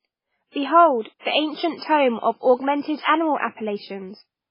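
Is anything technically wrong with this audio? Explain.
Yes, the whole clip shows MP3 compression artefacts, most likely from a very low bitrate, around 16 kbps. The treble is cut off above 5.3 kHz, and starved weak frequency lines flicker frame to frame, so the speech sounds heavily watery and swirly, with metallic chirps on s sounds.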